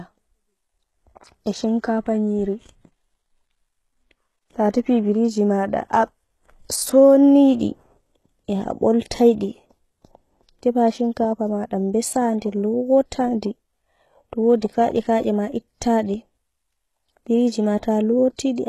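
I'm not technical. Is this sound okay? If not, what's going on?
No. Throughout, the speech has gritty, lispy s sounds and synthetic-sounding treble that stops near 12.4 kHz, likely heavy HE-AAC compression rebuilding the highs from lower frequencies.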